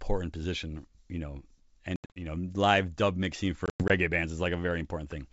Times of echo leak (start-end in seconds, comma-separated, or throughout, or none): none